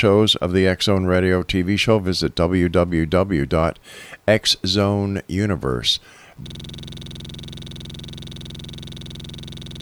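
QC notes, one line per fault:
6.47 s to the end, system hang loop: from here the sound freezes into one 46 ms slice repeating exactly, dozens of times, all the way to the end of the clip. The machine or driver has locked up while the audio hardware keeps replaying the same ring buffer, which fits a 2048-sample buffer. At 21.5 repeats a second it lands between a buzz and a stutter, so you hear a coarse, rattling drone.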